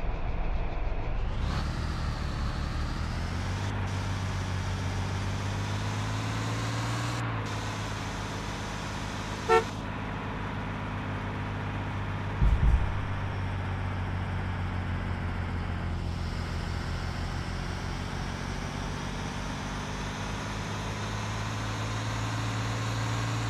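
Periodic clock jitter affects the sound from 0.0 to 12.57 s: interference wobbling the converter clock at around 1 kHz puts sidebands that far above and below every component, strongest on high frequencies, giving a rough, metallic edge that disappears in silent gaps.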